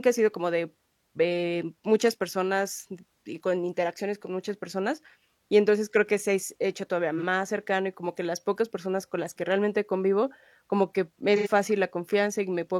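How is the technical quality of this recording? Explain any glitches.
Two short dropouts mar this speech recording, both from AAC frame loss with concealment. At 7.17 to 7.24 s a gap of about 43 ms, consistent with one lost frame, is patched over. At 11.36 to 11.48 s a longer gap of about 85 ms, pointing to two consecutive frames, gets the same treatment. The decoder rebuilds each missing stretch from the last good spectrum, so both spots sound like a brief smeared, noisy or phasey patch.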